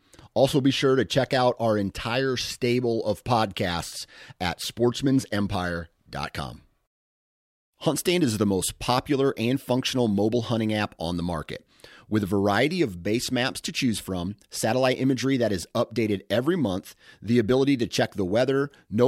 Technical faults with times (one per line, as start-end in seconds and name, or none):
none